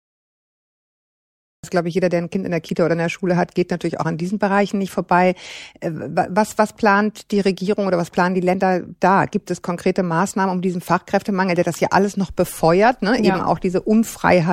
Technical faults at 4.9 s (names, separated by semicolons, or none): none